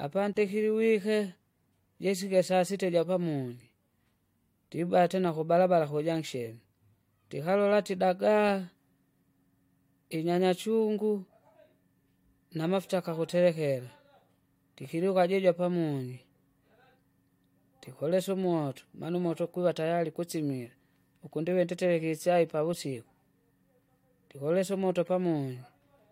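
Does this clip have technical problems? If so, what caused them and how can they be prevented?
Yes. At 0.33 to 0.36 s the speech drops into a silence of 28 ms and then resumes exactly where it left off, a gap at a join of encoded pieces. The audio was encoded as separate segments and concatenated without trimming, so the encoder's start-up delay and the padded final frame remain as dead air, with smeared edges from the codec. To prevent it, encode the material as one continuous stream, or trim encoder delay and padding at every join.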